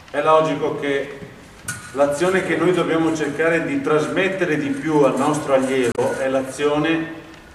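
At 5.92 s the audio is interrupted by a brief glitch lasting about 70 ms, ending at 5.99 s. This is damaged data in a compressed stream: a short run of the encoded bytes arrived corrupted, so the decoder either misinterpreted those frames or discarded them. It then had to resynchronise by hunting for the next valid frame header, and the garbled output during that gap is what produces the glitch.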